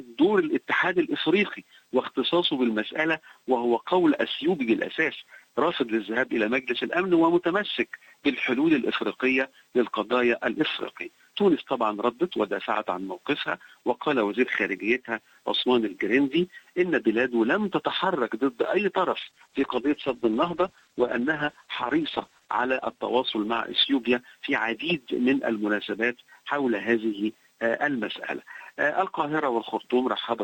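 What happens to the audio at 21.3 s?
At 21.3 s the sound sits inside a call bitrate drop running from about 19.19 to 24.91 s. The call's bandwidth estimate collapsed, so the encoder was forced down from a full-rate stream to a very lean one, roughly consistent with 64 kbps falling to around 11 kbps, held at its lowest for about 3.4 s. Coded that coarsely, the audio loses its top end and turns muffled, rough and watery until the rate recovers near 24.9 s.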